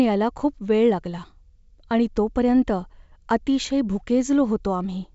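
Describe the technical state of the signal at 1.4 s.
At 1.4 s the audio is intact, with the speech carried through G.722 wideband telephone coding at 64 kbit/s and nothing heard above about 7.7 kHz.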